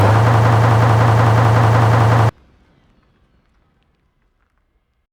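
From 0.34 s to 2.29 s the sound sticks: a 185 ms fragment repeats exactly, back to back, eleven times, like a skipping record. This broken-record loop likely comes from a stalled player or stream resending its last fragment, and the intended audio there is lost.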